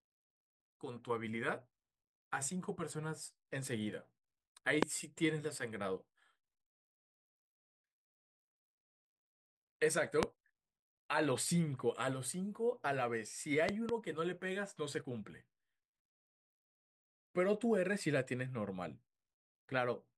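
At 4.83 to 4.85 s and again at 10.23 to 10.25 s, a single loud pop cuts across the speech, and from 13.69 to 13.91 s two pops land in quick succession. Each peaks at roughly 25 dB, the final pair nearer 20 dB, above the speech, which continues underneath. The likely cause is a sudden voltage step, such as a switch, static discharge or driver glitch, entering the signal chain. The waveform shows tall, narrow spikes, and the spectrogram shows thin broadband vertical stripes.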